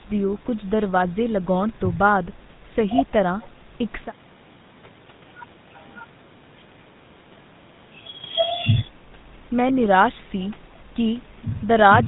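Throughout the speech, a GSM full-rate codec coarsens the sound. The excitation is rebuilt from sparse, regularly spaced pulses, giving a plainly audible buzzy, gravelly roughness that fits a 13 kbps stream. A spectrogram shows a hard ceiling near 3.8 kHz, with grainy, smeared harmonics beneath.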